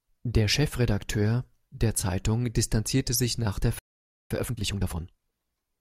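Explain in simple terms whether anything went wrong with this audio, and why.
Right after "distanzierte sich nach der", at 3.79 s, the speech cuts out into silence for about half a second, until 4.31 s. This is a playback stall: the player most likely ran out of audio data or was briefly held up, so nothing came out until it recovered.

From 4.31 s to 5.33 s the speech sounds rushed, about 1.5 times normal speed but at its usual pitch. This is time-compressed catch-up: to make up for the delay, the player snips out small pieces and blends the remaining parts together.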